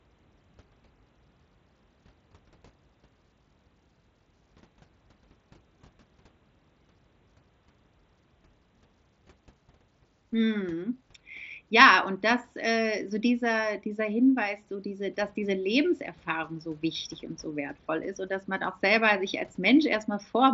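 No faults found in the speech; it sits within the band of an mSBC Bluetooth headset link, with nothing above about 7.7 kHz.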